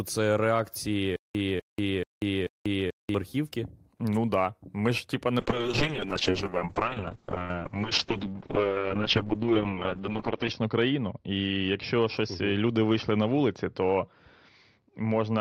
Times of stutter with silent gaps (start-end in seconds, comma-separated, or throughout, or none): 1.16-3.15